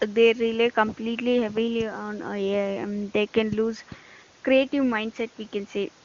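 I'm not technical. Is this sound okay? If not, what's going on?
Yes, this speech sounds fine, with nothing going wrong anywhere in it. It has the clear, full quality of an HD Voice phone call, and the wideband phone codec used here at its highest-quality setting leaves little or no audible trace.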